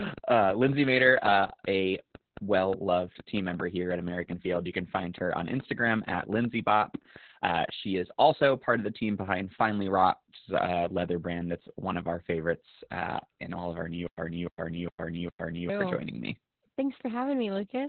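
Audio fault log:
Throughout: Opus voice compression. The whole clip has that muffled, hoarse, slightly robotic quality of Opus running its SILK speech coder at a very low rate. Everything above about 4 kHz is gone, so it's narrowband, phone-like audio, and the excitation is coded so coarsely that the voice turns buzzy and rough. The damage is heavy, and it fits a bitrate down around 8 kbps with 20 ms frames.
14.07 to 15.69 s: stutter with silent gaps. Just before "for joining me", the same fragment of roughly 0.3 s plays four times. Each repeat is followed by about 0.11 s of dead digital silence, so the burst comes back on an even beat of about every 0.41 s. The likely cause is the stream stalling and replaying its last buffered chunk on each retry, then running dry. Whatever should have played in that stretch is simply lost.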